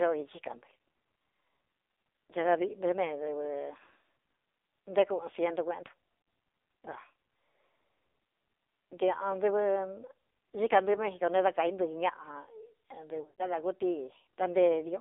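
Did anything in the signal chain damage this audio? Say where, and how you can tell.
Yes, at the codec: the speech is confined to about 300 Hz to 3.7 kHz and sounds heavily buzzy and synthetic, the AMR narrowband mobile codec at a rate that fits 5.9 kbps.

On the network, lost AMR speech frames: brief warbles at 0.36 and 6.22 to 6.26 s, then a smeared fade at 13.22 to 13.45 s, where the decoder extrapolated through scattered gaps.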